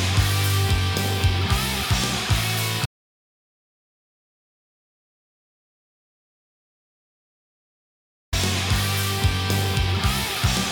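From 2.86 to 8.33 s, an audio dropout to silence cuts the sound, likely from lost input; the waveform flatlines and the spectrogram goes blank.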